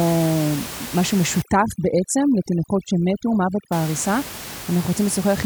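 Speech with a room noise bed sitting about 13 dB under the voice, which is part of the recording itself. From 1.42 s to 3.72 s you get overdone noise removal: the reduction is clamping individual frequency bands hard whenever they dip near its noise estimate, so the background drops and breaks up into little twinkling specks, and the softer parts of the voice get dragged down too until the processing lets go.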